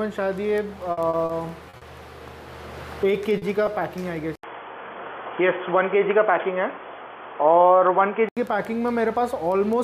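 Between 0.91 and 1.84 s the audio breaks into choppy, robotic fragments from repeated packet loss: five gaps (the longest 60 ms) are patched, leaving striped, smeared blocks on a spectrogram. From 3.38 to 3.45 s a short stall from a late packet holds one sound about 40 ms too long, showing as a flat stretched patch in the waveform. From 4.35 to 8.37 s the sound turns duller and boxier, with nothing above 3.4 kHz, an 80 ms silent gap at the start, a modest level shift and a new faint noise floor, likely from the input switching to a poorer device; a spectrogram shows a hard ceiling across that span.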